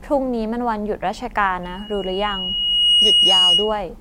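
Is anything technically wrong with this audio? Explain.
Yes. From 1.63 s to 3.82 s the speech is overrun by loudspeaker feedback squeal. A microphone is picking up the loudspeaker it drives, and at 2.9 kHz the round-trip gain exceeds one, so that frequency reinforces itself on every pass. It swells over roughly a second and a half into a piercing single tone, ending up around 10 dB above the speech, until it stops just before the clip ends.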